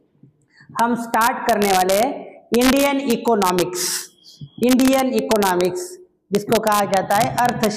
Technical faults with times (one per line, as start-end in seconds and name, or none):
0.00-7.76 integer overflow